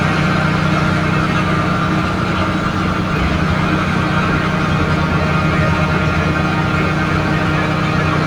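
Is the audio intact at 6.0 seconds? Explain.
Yes, the audio is intact at 6.0 seconds, with no fault heard at that moment.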